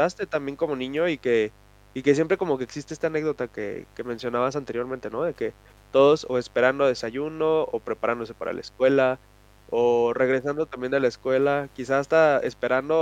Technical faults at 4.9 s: mains buzz

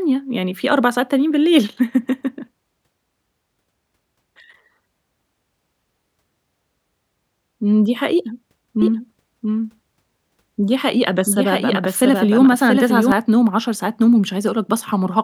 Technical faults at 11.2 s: doubled audio track

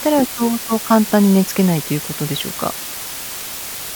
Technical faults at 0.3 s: low bit depth with dither

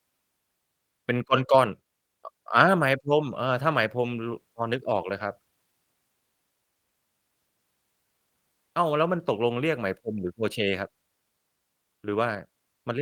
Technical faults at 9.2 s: none

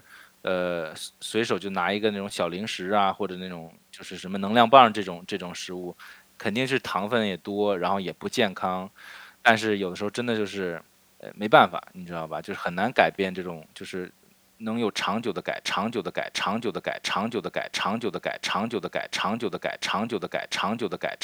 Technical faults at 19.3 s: broken-record loop

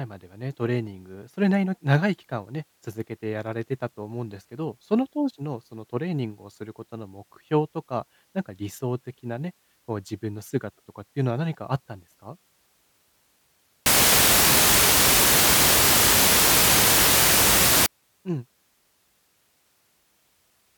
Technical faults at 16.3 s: samples built from the wrong bytes

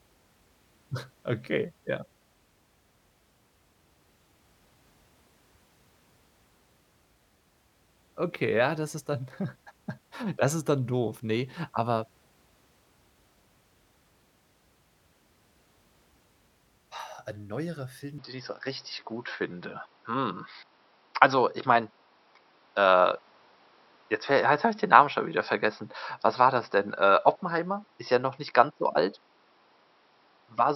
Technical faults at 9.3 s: none

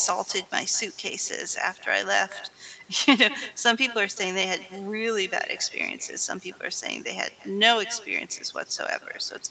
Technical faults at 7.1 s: echo with no canceller

